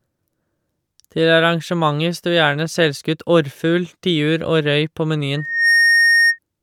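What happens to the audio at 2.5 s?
Nothing goes wrong at 2.5 s; the speech carries on intact through that moment, with no dropout, click or distortion.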